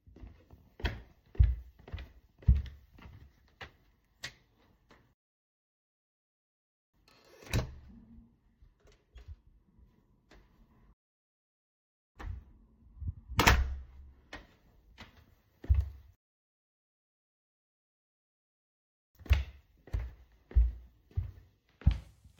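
The player ran out of downloaded audio three times in this recording of sounds, producing rebuffering stalls at 5.13 to 6.94 s, 10.93 to 12.16 s and 16.15 to 19.15 s. Each time playback halts into silence for 1.8 s, 1.2 s and 3.0 s respectively, then picks up at exactly the point where it stopped, so no material is skipped but about 6 s of dead air is added.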